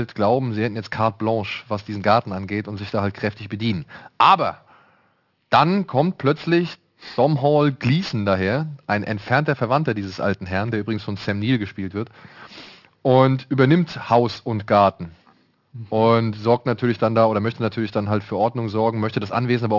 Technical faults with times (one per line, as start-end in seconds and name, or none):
0.00-19.79 aliasing